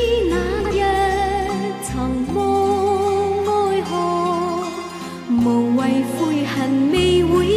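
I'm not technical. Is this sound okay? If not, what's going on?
No. Just after the start, from about 0.60 to 0.71 s, the sound briefly turns into a garbled flutter. This is a case of frames out of order: two neighbouring chunks of audio, each about 52 ms long, were played back in swapped order, so that tenth of a second comes out scrambled. Nothing is missing, though. Everything plays, just in the wrong sequence for that brief moment.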